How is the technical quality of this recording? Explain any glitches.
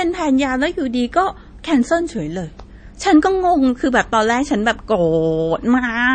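The recording has audible compression damage throughout. The whole clip shows MP3 compression artefacts, likely from a low bitrate around 33 kbps. Short of bits, the encoder cut everything above 9 kHz and dropped weak frequency components frame by frame, leaving the speech dull, watery and swirly, with smeared consonant attacks.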